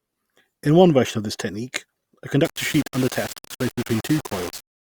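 From 2.45 s, right after "of this technique a", and continuing to the end, the speech turns coarse and gritty. A grainy distortion rides on every syllable, shifts with the sound, and sits only about 15 dB below the signal. The quietest stretches break up into sputter or drop out. The likely cause is low bit depth without dither, consistent with roughly 5-bit resolution, where samples are rounded to a few coarse steps so the error tracks the waveform.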